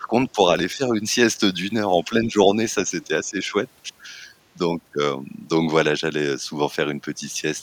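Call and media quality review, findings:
Speech suppressed in double talk: level dips at 0.00–0.12, 0.33–0.39, 0.75–0.92, 2.08–2.35 and 3.07–3.55 s, about 5 to 15 dB deep, deepest at the start. Likely echo canceller attenuating the near talker while far-end audio is active.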